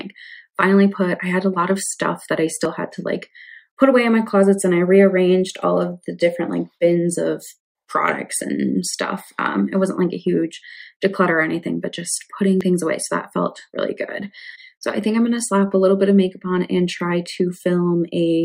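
There are two tiny skips in the audio, at 2.65 s and again at 12.61 s, each losing roughly 20 ms, with the sound on either side butted straight together and no gap of silence. That's the signature of audio missing between chunks: the recorder or processor is likely working in 5-second blocks and dropping a sliver each time it hands off from one block to the next.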